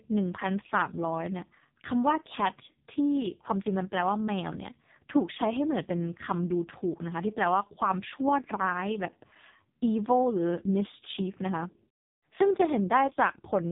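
From start to finish the speech carries heavy AMR narrowband mobile codec damage. Nothing above 3.8 kHz survives, and the vocal-tract model is starved of pulses, leaving a buzzy, synthetic timbre that points to the lowest AMR-NB mode, around 4.75 kbps.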